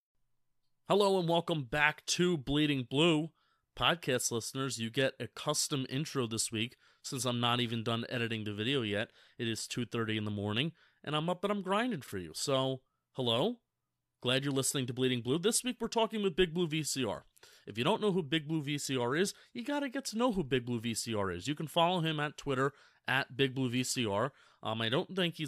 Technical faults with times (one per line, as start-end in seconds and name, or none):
12.04-12.12 chunks out of order